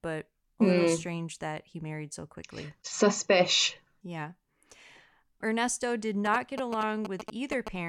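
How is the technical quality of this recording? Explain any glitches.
One fault stands out: GSM signalling bursts interrupt the speech from 6.26 to 7.69 s. They sound like a galloping dit-dit-dit of short buzzes, sitting only a little below the level of the speech. The buzz repeats at about 217 Hz, the frame rate of a 2G phone's transmitter. A nearby handset sending brief signalling bursts radiated energy into the audio circuitry, which rectified it into this audible pattern.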